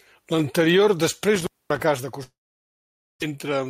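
From 1.36 to 1.82 s an intermittent contact breaks the line for about 237 ms. Crackle marks both edges as the connection opens and closes, with faint hiss in between. On a waveform this is a near-flat gap bracketed by sharp spikes; a spectrogram shows broadband vertical streaks at each edge.

At 2.23 s the audio gives way to a fading buzz or hiss that decays into silence, and the sound does not return until 3.24 s. The likely cause is a long network dropout: about 600 ms of audio was never played and the receiver filled the gap by stretching the last sound before going quiet, with roughly 870 ms of silence overall. The later audio resumes without the missing stretch, and the delay shifts by around 0.4 s. A spectrogram shows smeared, dissolving harmonics followed by an empty band.

From 3.31 to 3.67 s a jitter buffer speed-up plays the speech about 9% fast (109% speed) at unchanged pitch, trimming a few tens of milliseconds through many small cuts of one or a few pitch periods. 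It sounds hurried, and the waveform shows compressed syllables with subtle splice points.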